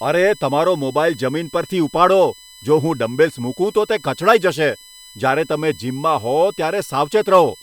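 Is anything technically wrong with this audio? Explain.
Yes. A USB whine runs through the whole speech clip: a fixed-pitch tone built on 1 kHz, strongest at its 4 kHz harmonic, sitting roughly 25 dB below the speech. Current drawn in the bus's 1 ms frames is leaking into the audio through power or ground.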